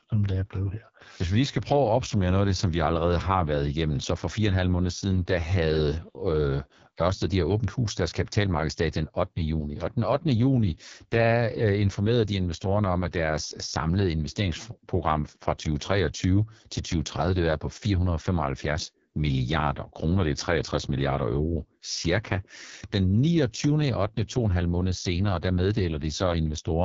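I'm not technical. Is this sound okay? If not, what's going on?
No. The speech runs throughout through an AMR wideband (HD Voice) codec squeezed to one of its lowest settings, so voices sound rough and raspy. Unlike ordinary phone muffling, the top still reaches about 7 kHz; the harshness comes from crude voice modelling.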